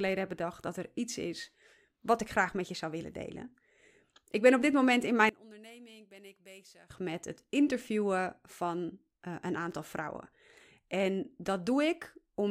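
From 5.29 s to 6.90 s, the speech suddenly drops by about 23 dB and almost disappears. What remains for those 1.6 seconds is faint. The likely cause is one channel inverted: one side of the stereo pair has its polarity flipped. When the two sides are summed to mono, the centred voice cancels itself out. Only the small differences between the channels survive. Full level returns at 6.90 s.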